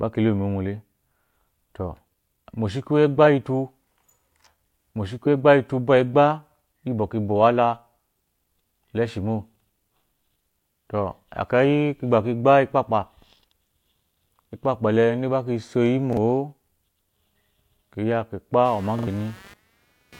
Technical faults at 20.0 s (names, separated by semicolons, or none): computer activity noise